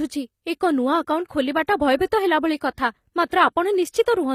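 From start to finish the treble sounds bright but artificial: s sounds come out gritty and lispy, with a metallic sheen above the voice's lower range. The likely cause is HE-AAC compression, which codes only the lower spectrum and rebuilds the upper band by copying lower bands upward under a coarse envelope. The damage is plainly audible, which fits a low bitrate in the region of 24 kbps, where the replicated harmonics fail to line up with the real ones.

From 3.28 to 3.32 s a brief hiss creeps in just ahead of a sharp onset, and the attack itself sounds softened and smeared. This is pre-echo, spread over about 39 ms. The codec distributed quantisation noise evenly across its transform block, so noise sized for the loud attack also filled the quiet moment before it, where nothing masks it.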